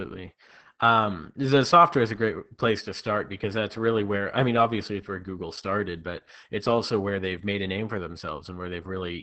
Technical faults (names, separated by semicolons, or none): Opus voice compression